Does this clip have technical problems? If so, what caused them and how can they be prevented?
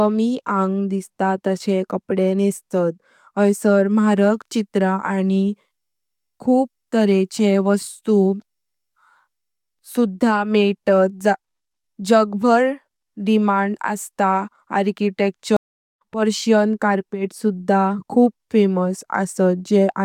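Yes. A stream reconnect occurs between 15.57 and 16.02 s. The connection dropped, leaving 0.43 s of silence, and a fresh decoder resumed the speech roughly 0.4 s further on, at "पर्शियन कार्पेटस सुधा खूब". A deeper client buffer and connection keep-alives would prevent it.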